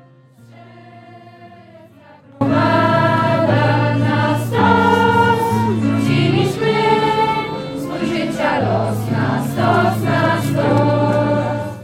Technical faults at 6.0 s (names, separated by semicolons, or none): none